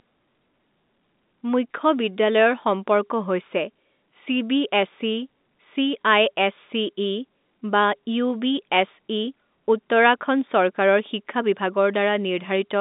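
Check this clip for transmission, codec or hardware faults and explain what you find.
I hear no faults.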